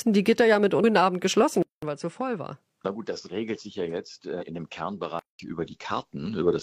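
Damaged data in the compressed stream at 0.79 to 0.84 s makes the decoder lose sync briefly, leaving a short glitch. At 1.63 s the input likely switched to a poorer device: after a 200 ms silence the sound turns duller, with nothing above 9.8 kHz, roughly 10 dB quieter and a faint new noise floor, until 5.39 s. A second damaged-data glitch sounds at 4.37 to 4.43 s.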